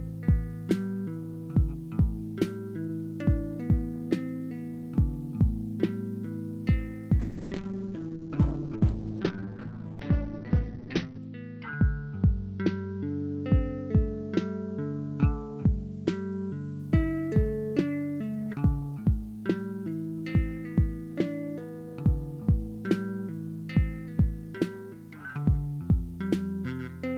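From 7.2 s to 16.85 s the audio suffers a call bitrate drop: the top end closes in from a full 20 kHz band to about 6 kHz, and the sound turns coarse and watery, worst for roughly 4 seconds before it recovers. That depth of degradation fits the encoder being pushed from around 32 kbps down to near 7 kbps. Unlike packet loss, nothing drops out or stutters, and unlike a plain low-pass filter, the muffling comes with grainy coding artefacts.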